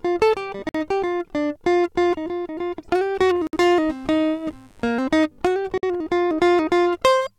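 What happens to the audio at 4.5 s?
At 4.5 s the music sits under a mains buzz running from 3.34 to 5.05 s. Interference from the 50 Hz supply leaks in as sharp spikes twice per cycle, spreading harmonics into the kilohertz range and laying a steady, raspy buzz roughly 35 dB below the music.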